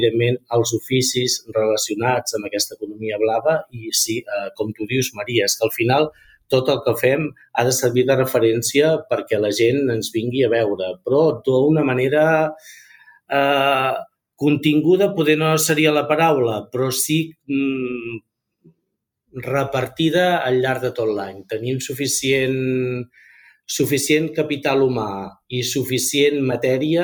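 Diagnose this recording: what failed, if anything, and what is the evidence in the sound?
The call-processing stage failed: the sound was cut by the noise suppressor three times, at 2.7–3.02 s, 3.65–3.81 s and 6.11–6.52 s. The suppressor judged the sound to be noise and pulled it down by about 18 dB, about 18 dB, then about 11 dB, over stretches of a few hundred milliseconds in all. On a waveform the envelope sags abruptly in those windows. A spectrogram shows the energy fading to a darker band before recovering.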